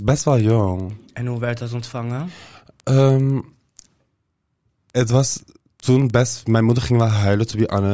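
Right from the start and all the way through, there's a steady tick running under the speech about ten times a second: the resampler is restarted on every block. Each 100 ms chunk gets converted on its own, so at every block edge the filter has no real neighbouring samples to work with and leaves a small error. The ticks only show up when there's signal. The conversion sounds like 44.1 kHz down to 16 kHz.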